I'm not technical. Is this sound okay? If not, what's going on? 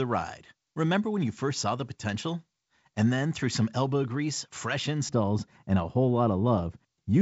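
No. From 5.09 s, right after "some elbow grease fresh", to the end, the speech turns dull and muffled. This is de-emphasis applied wrongly: a treble cut meant to undo a boost that was never there. Unlike an abrupt cutoff, the highs fade away gradually.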